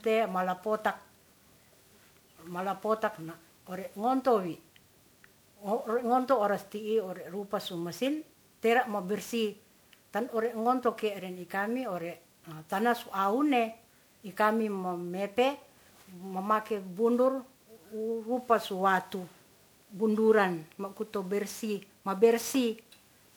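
From start to finish the speech has a swirly, smeared, hollow quality and blurred consonant attacks, more than a single 128 kbit/s MP3 would give. That points to generation loss, likely from being re-encoded around ten times, each pass stacking fresh quantisation noise and spectral holes.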